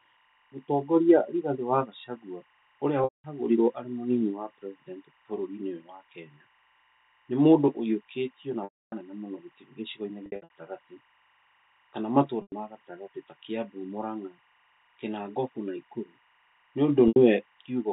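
Speech carries timecode bleed throughout: a faint chirping warble roughly 40 dB below the voice, which fits 23.976-frame linear timecode leaking from a neighbouring line. On a spectrogram it shows as thin steady bands near 1 and 2 kHz. Packet loss with pitch repetition occurs at 3.04–3.24 s, 8.64–8.92 s, 10.26–10.50 s (scattered short gaps), 12.42–12.52 s and 17.08–17.16 s. The receiver loops the last pitch period, so the waveform shows identical repeating cycles fading toward flatness and the spectrogram shows frozen, smeared harmonics. The telephone-band G.711 coding keeps everything below 4 kHz.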